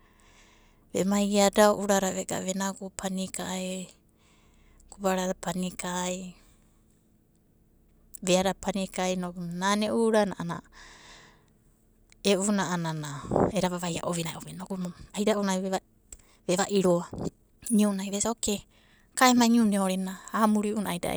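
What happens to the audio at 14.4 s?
A time-stretched section runs from 13.46 to 19.94 s, covering 6.5 s and including 14.4 s. The speech is likely sped up about 1.4 times by software dropping short slices to keep pitch unchanged, so the pace lurches faster and sounds rushed.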